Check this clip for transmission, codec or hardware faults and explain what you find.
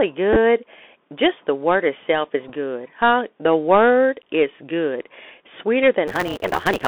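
Three kinds of fault are present: the Bluetooth CVSD headset codec across the whole clip, two Bluetooth headset packet repeats, and a block size mismatch (truncated) at the end.

Bluetooth CVSD headset codec, throughout. The audio sounds as if it passed through a narrowband Bluetooth headset link running CVSD, which fits a 64 kbps stream. CVSD sends one bit per sample, signalling only whether the waveform should step up or down, and the step size adapts as it goes. The line is confined to roughly 250 Hz to 3.5 kHz, so the speech sounds thin and boxy. The codec damage is plainly audible: fast high-frequency detail outruns the step size, s sounds turn scratchy, and a granular hiss sits under the speech.

Bluetooth headset packet repeated, 0.33 to 0.36 s and 2.48 to 2.51 s. Voice packets between the headset and the phone were lost, and each time the chip decoded the previous packet's bits again instead of leaving a gap.

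In the first event, about 15 ms of audio is lost, scattered over 30 ms. That fits four lost packets. No run is much longer than a single packet of about 4 ms, so the repeats come through as small ticks rather than a sustained tone.

The second event loses about 11.2 ms, which fits three packets in a row. Repeating the same 3.75 ms packet back to back produces a short burst of buzz near 267 Hz before good packets resume.

Block size mismatch (truncated), 6.07 s to the end. From this point, one stage is writing longer blocks than the next stage reads, and the leftover tail of each block is discarded. The pattern fits a reader taking 256-sample blocks while the writer delivers blocks about 1.88 times longer. Because part of every block is dropped, the speech runs about 1.88 times too fast. The regular chopping at each block boundary also adds a buzz at about 188 Hz over the final stretch.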